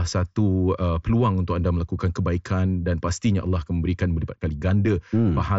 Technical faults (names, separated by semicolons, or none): none